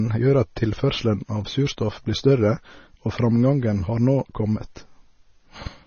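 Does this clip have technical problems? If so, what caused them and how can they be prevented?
Yes. Throughout the speech the sound is watery and swirly, with nothing above about 6.6 kHz and chirpy, smeared s sounds. This is likely heavy MP3 compression, which fits a very low bitrate around 24 kbps. Encode at a higher bitrate or save losslessly.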